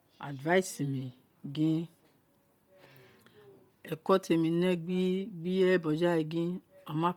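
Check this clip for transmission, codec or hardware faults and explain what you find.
One codec fault runs through the whole clip: Bluetooth LC3 compression is the likely cause. The speech carries a breathy, grainy edge across the upper band. This fits a low bitrate near 32 kb/s with 10 ms frames, where zeroed high bands are refilled with noise. The content stops at 20.2 kHz.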